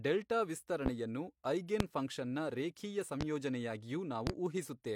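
Four loud pops land on the speech, each a single sharp hit lasting about 40 ms: at 0.86 to 0.90 s, at 1.80 to 1.84 s just before "ಫಂಕ್ಷನ್ ನ", at 3.21 to 3.25 s and at 4.27 to 4.31 s. Each jumps out around 20 dB above the speech, the second one more like 25 dB. The talking carries straight on underneath. The likely culprit is a sudden voltage spike from a plug, a switch, static or a driver glitch.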